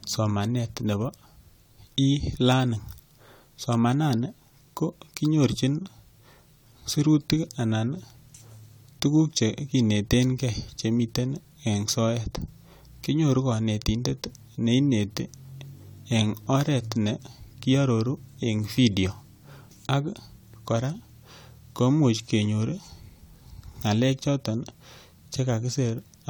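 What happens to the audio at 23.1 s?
At 23.1 s you're hearing generation loss, which runs through the whole clip. The speech sounds swirly, smeared and hollow, with softened attacks, though content still reaches about 20.1 kHz. That likely comes from roughly three passes through an AAC-LC encoder, consistent with about 96 kbit/s, each pass re-quantising on a shifted frame grid.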